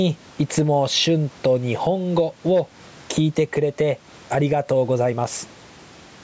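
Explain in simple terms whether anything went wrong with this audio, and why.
There's gain pumping all the way through the speech: loud and soft parts end up closer in level, and the sound is squashed. That's likely from the microphone level set way too high, with a fast limiter constantly clamping it down.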